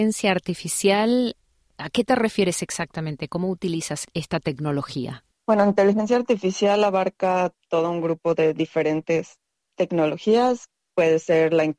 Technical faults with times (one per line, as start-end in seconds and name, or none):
none